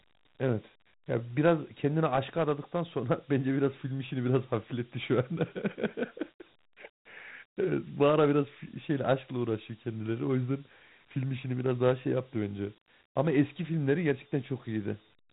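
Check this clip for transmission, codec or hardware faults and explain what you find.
One codec fault is present. Dialogic VOX ADPCM runs throughout: 4-bit adaptive coding, consistent with about 32 kbps, leaves plainly audible gritty hiss trailing the speech and nothing above 3.9 kHz.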